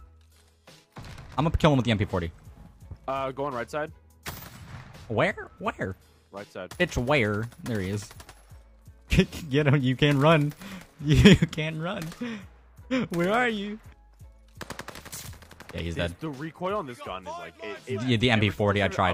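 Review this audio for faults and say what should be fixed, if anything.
Nothing needs fixing, since no faults turn up anywhere in the audio.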